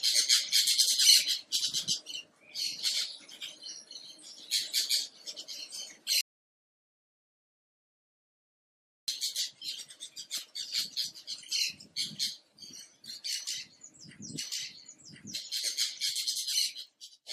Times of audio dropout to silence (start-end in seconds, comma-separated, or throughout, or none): 6.21-9.08